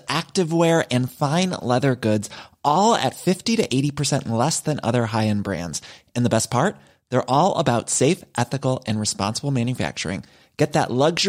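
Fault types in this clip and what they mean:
No technical fault can be heard anywhere in this speech recording; the signal stays continuous and steady throughout, with nothing breaking into it.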